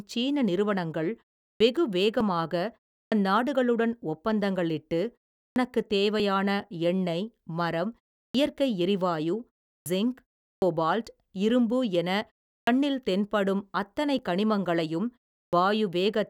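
Speech with two faults. Clipped starts after a pause occur at 1.52, 3.03, 5.48, 8.27, 9.78, 10.55, 12.59 and 15.45 s. Each follows a pause of about 0.33 to 0.39 s. Roughly 70 to 84 ms of the onset is lost, so words begin abruptly. The output device goes idle in the pause and cannot restart in time. Audio missing between chunks is heard as tiny skips at 2.21, 6.20 and 14.19 s. Each drops only a few milliseconds, and the two sides are joined directly. The spacing fits 4-second processing chunks, with the likely cause a brief loss at each chunk handover.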